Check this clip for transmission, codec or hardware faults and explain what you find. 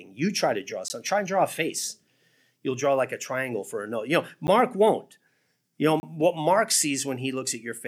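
Three dropouts in the speech, all blocks of digital silence: at 0.88 s (about 17 ms), 4.47 s (10 ms), and 6.00 to 6.03 s (30 ms). Most likely the output buffers weren't filled in time, so the sound cut out with hard edges. The 10 ms one ticks, and the 17 ms and 30 ms ones are small holes.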